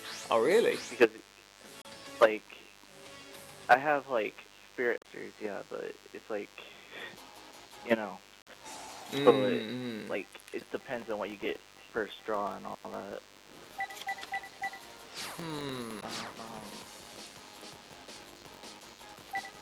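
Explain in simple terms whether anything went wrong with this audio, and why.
Yes, a few things went wrong, and they stack on top of each other.

The whole clip carries a thin, steady buzz, the classic DECT cordless phone buzz. A cordless phone or its base station sitting nearby fires a short radio pulse 100 times a second, and the audio circuitry picks that up and turns it into sound. The result is a low, wiry hum at 100 Hz with lots of harmonics, sitting quietly under everything from start to finish.

There are also five quick glitches from damaged data in a compressed stream, at about 1.82, 4.98, 8.41, 10.58 and 15.99 seconds. Each is a brief chirp or blip lasting well under a tenth of a second. Part of the compressed data got corrupted, so the decoder couldn't make sense of those frames, lost its place, and had to hunt for the next clean frame before carrying on.

Finally, from about 10.72 seconds to the end, a filter restarted on every block. 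The filter forgets where it was after every chunk of 1024 samples and starts fresh each time, which puts a tiny kick at the start of every chunk. Those kicks come about 47 times a second, so you hear a low, rough buzz that gets louder and softer along with the sound itself.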